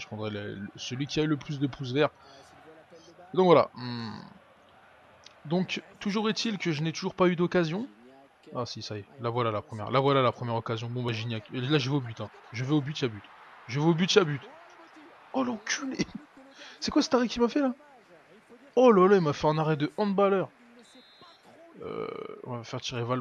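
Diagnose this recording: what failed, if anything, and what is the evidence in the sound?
The failure is at the codec stage: compressed frames skipped at 11.08 s. You hear the sound jump ahead, with a short discontinuity where the decoder joins the frames on either side of the gap. The frame length works out to about 26.1 ms, and roughly one frame went missing, so around 30 ms of audio is simply gone. Either that frame never made it into the file, or the decoder threw it out as damaged.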